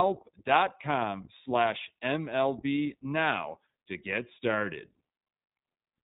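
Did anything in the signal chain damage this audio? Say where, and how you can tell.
Yes. The damage is at the codec stage and runs through the whole speech clip: nothing passes above 4 kHz, and the speech has a plainly rough, slightly synthetic grain. That grain sets it apart from a plain low-pass filter or a narrowband converter. An iLBC codec codes each frame's excitation independently of the one before, and the character fits 20 ms frames at around 15.2 kbps.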